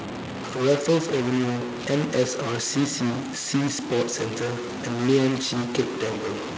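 A stuck bit runs through the whole recording: a distortion rides on the speech, and the pauses are not clean but filled with a gritty noise floor. That pattern is the signature of a likely stuck data bit in the converter or its wiring, with one bit held at a fixed value. Roughly half the samples are pushed off by that bit's weight. Because the bit also flips with the sign of small values, the quiet gaps turn into noise.

An echo leak appears from 4.52 to 4.8 s and again from 5.67 to 5.98 s as a faint, delayed copy of the speech trailing the original by 293 ms and sitting well down, around 25 dB below it. It sounds like a ghost of what was just said. The likely cause is a far end playing the call on a loudspeaker, with an echo canceller that failed to remove everything its microphone picked up and sent that residue back down the line. Through the call path, which carries nothing above 8 kHz, the echo scraps sound faint.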